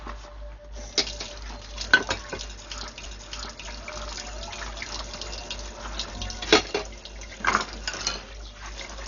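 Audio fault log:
Throughout: Dolby Digital compression, heavy. The sound is dull, with nothing above 7 kHz, and a rough, fluttering noise clings to tonal parts. The likely cause is an AC-3 style encoder starved of bits, around 48 kbps. It cuts the top of the band to save data. Many frequency lines get no detail bits at all. The decoder fills those gaps with random noise, which produces the grainy flutter.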